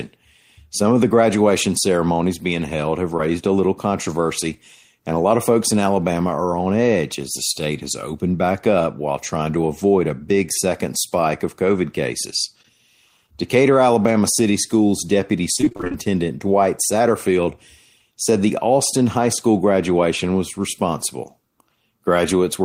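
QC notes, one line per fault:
3.17–3.21 s, short concealed packet loss: about 20 ms of the stream arrived too late to decode, and the receiver patched roughly 12 ms of it by extending the preceding sound before blending back in, so you get a quick smear or wobble right there.
15.57–15.96 s, repeated packet loss (robotic sound): ten separate dropouts hit this stretch, the longest about 27 ms, with around half the span rebuilt by concealment. Each patch repeats the last bit of sound, so it comes out choppy.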